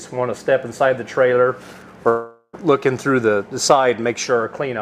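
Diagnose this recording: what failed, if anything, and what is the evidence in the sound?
A long network dropout, likely in transit: from 2.09 to 2.55 s a fading concealment buzz replaces the sound, and 0.44 s of audio is lost.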